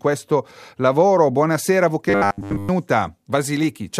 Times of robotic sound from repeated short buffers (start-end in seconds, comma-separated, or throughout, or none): 2.10-2.69